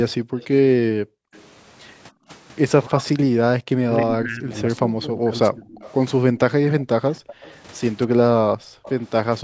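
From 0.4 to 1.47 s a faint echo leak trails the speech by 284 ms, about 30 dB below it. This is likely loudspeaker sound that the far end's echo canceller failed to remove and sent back. On a spectrogram it appears as a weak, smeared copy of the harmonic bands shifted right by just under a third of a second. It rises to about 20 dB below the speech from 5.69 to 7.55 s, and returns briefly from 8.83 to 8.95 s.

Overlapping this, speech suppressed in double talk runs from 0.47 to 5.7 s. The speech repeatedly dips and drops out in pieces, adding up to roughly two seconds, with the deepest cuts about 40 dB. The likely cause is an echo canceller treating the talker as echo while both sides spoke and attenuating everything. The waveform shows sudden notches in the envelope, and the spectrogram shows vertical gaps where the harmonics vanish. A shorter dip of about 25 dB falls between 6.85 and 7.12 s. 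Between 8.07 and 9.44 s there are further cuts of up to about 40 dB, totalling a few hundred milliseconds. Across the clip, the spectrum stops at 8 kHz.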